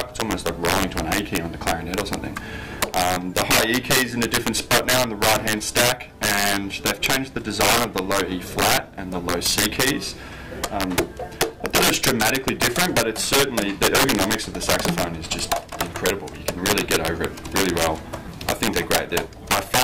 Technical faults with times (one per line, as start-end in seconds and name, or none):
0.00-19.83 integer overflow